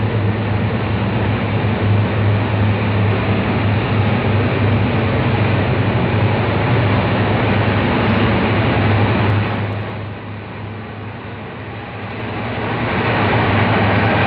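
Level changes from 9.22 to 10.16 s and 11.86 to 13.23 s are applied in unsmoothed 1 dB steps, about ten per second, causing zipper noise: audible ticking as the level drops, then rises, by around 15 dB.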